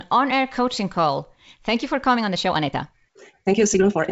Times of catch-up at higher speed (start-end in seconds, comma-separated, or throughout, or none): none